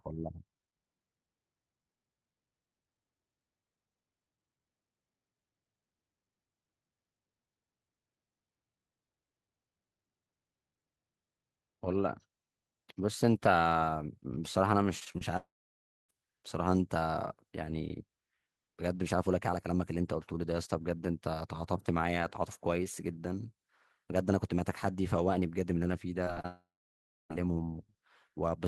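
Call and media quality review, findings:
Repeated packet loss (robotic sound), 14.99–15.23 s. Choppy stretch with four holes, the longest 28 ms, about 31% of the span concealed. Network/jitter buffer: packets repeatedly lost or late, each gap patched by extending the preceding sound before the next gap arrives.

Long network dropout, 15.37–16.11 s. About 0.72 s of audio missing. Concealment extends the last sound as a decaying buzz or hiss, then roughly 0.62 s of near-silence. Likely a network outage. Audio resumes with the lost section skipped, immediately following the 14.99 s choppiness.

Long network dropout, 26.46–27.32 s. About 0.84 s missing, decaying concealment tail, then roughly 0.65 s of silence before audio returns without the lost part. Same network mechanism, likely the tail of the 26.25 s loss burst.

Short concealed packet loss, 26.25 s. About 20 ms missing, patched by extrapolating the prior waveform. 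Audible as a brief smear or wobble where the decoder blends back into real audio.

Short concealed packet loss, 26.34–26.38 s and 26.42–26.46 s. Two more holes of about 20 ms each, concealed the same way as brief wobbles. The third runs straight into the 26.46 s dropout, consistent with a worsening link. Band-limited to about 12 kHz throughout, which fits an Opus call path near 24 kbps.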